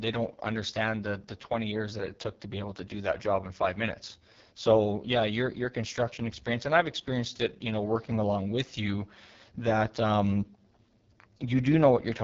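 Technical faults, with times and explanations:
Throughout, AMR wideband (HD Voice) codec: the speech sounds rough and raspy, which points to the codec's lowest 6.6 kbit/s mode. A pulse-driven vocal-tract model rebuilds each frame too coarsely at that rate. Nothing is present above 7.4 kHz.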